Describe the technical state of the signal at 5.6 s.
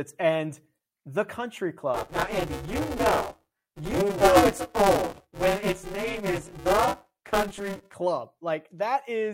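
At 5.6 s the speech is inside a buffer tearing span from 1.94 to 7.94 s: roughly half of each period replays audio about 20 ms old, giving a robotic 200 Hz buzz.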